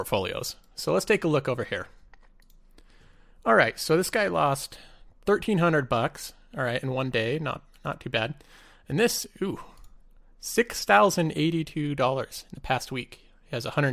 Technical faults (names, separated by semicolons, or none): none